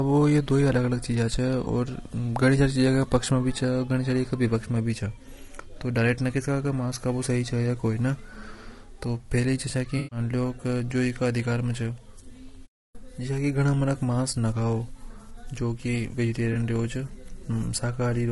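Across the whole recording the speech is rough and grainy, with a hiss that fills the gaps between the pitch harmonics and a top band that sounds thin and synthetic. This is likely low-delay AAC compression of the AAC-ELD kind, with a bitrate that sounds like around 32 kbps. Its very short frames cannot separate the harmonics cleanly. A plain band limit would only dull the sound, but this adds noise inside the band.

At 1.63 to 1.67 s and at 16.53 to 16.56 s there are AAC frame losses with concealment, each about 20 ms long. The decoder bridges each gap from the last good spectrum, which leaves a brief smeared, noisy patch. A longer loss from 9.97 to 10.19 s, about 140 ms, turns phasey and sags as the concealment runs on. A plain dropout would leave hard silence and clicks. Here the gap is filled with a blurred copy of the sound around it.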